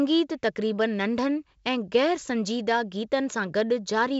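Nothing here counts as a technical fault; the speech simply arrives over G.722 wideband telephone coding at 56 kbit/s, so the top end tops out around 7.7 kHz and there's a light layer of coding grain, which is just how that link normally sounds.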